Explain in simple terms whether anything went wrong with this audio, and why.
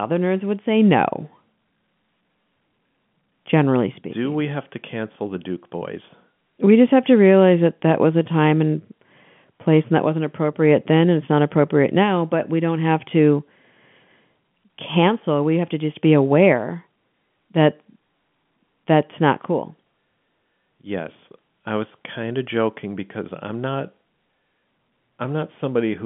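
Nothing went wrong here.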